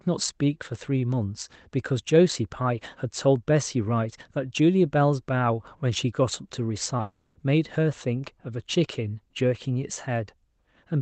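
At 6.83 s and again at 6.97 s there is short concealed packet loss. Each time about 20 ms of the call failed to arrive, and the receiver covered the gap by extending the preceding sound before blending back into the real signal. Each one is heard as a quick smear or wobble. On a spectrogram it shows as a brief patch where the harmonics flatten and repeat rather than evolving, with a slight seam at the rejoin.

From 7.01 to 7.37 s the sound is replaced for about 340 ms by a continuation that decays into a buzzy, fading hiss, ending in roughly 40 ms of silence before normal audio resumes further on. This is likely a long network dropout, with the missing portion never played. On the waveform the envelope tapers smoothly to nothing. The spectrogram shows smeared, blurring harmonics that thin out to an empty band, all capped near 8 kHz like the rest of the Opus-coded call.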